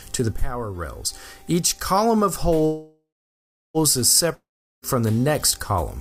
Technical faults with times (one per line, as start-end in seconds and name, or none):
2.65-3.77 call audio freeze
4.34-4.85 long network dropout